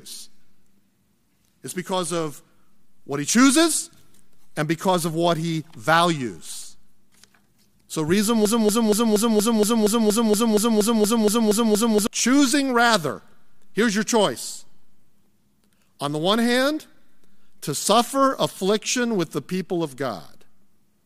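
Speech that sticks from 8.45 s to 12.07 s: a fragment of about 0.24 s repeats back to back 15 times, a broken-record loop, before resuming at "choosing rather here's your". The player or stream likely stalled and kept resending its last buffered fragment, so the original audio from that stretch is lost.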